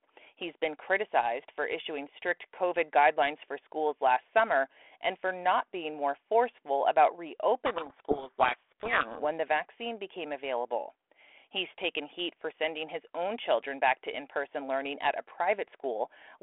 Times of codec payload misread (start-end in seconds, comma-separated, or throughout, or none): 7.66-9.26